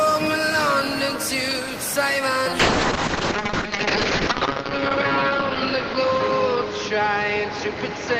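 From 2.6 s onward, a call bitrate drop from 32 to 6 kbps narrows the bandwidth from 20 kHz to 8 kHz, and the audio turns coarse and muffled.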